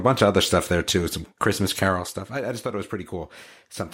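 From 1.84 to 2.26 s the speech drops in level with an audible ticking or zipping riding on it, a rapid train of small clicks that stops once the level settles. This is zipper noise: the gain was lowered in 2 dB jumps rather than a smooth ramp, around fifteen steps a second, for a fall of roughly 10 dB. Each abrupt jump puts a small discontinuity into the waveform, and together they form the zipper texture.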